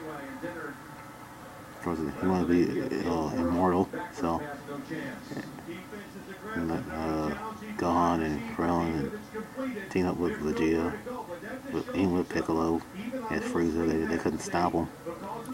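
At 2.18 s and again at 9.08 s, the sound jumps. Each is likely a dropped buffer (overrun). A few milliseconds were overwritten before being read, so the audio skips ahead with no gap of silence.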